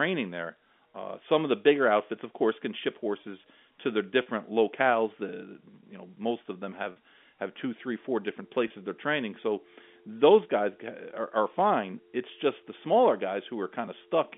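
Packet loss with pitch repetition breaks the telephone-band audio three times, each gap bridged by repeating the last pitch period. About 40 ms go at 4.22–4.26 s after "ship horses to their" and at 6.92–6.96 s after "know most of them". About 20 ms goes at 8.68–8.70 s after "two three four different". Each gap is a brief held, buzzy tone.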